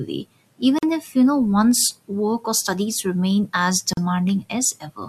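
At 0.79 s, just before "if you know one's", and at 3.93 s, after "or studies remain as", a gap at a join of encoded pieces cuts the speech for about 43 ms and 39 ms. Encoder delay and end padding were left in, so speech resumes where it stopped.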